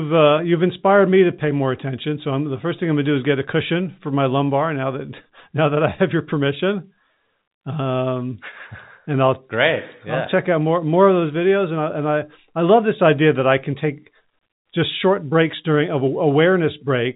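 There are no technical faults to describe in time order; the speech comes through as ordinary G.711 telephone coding, with nothing above about 3.8 kHz.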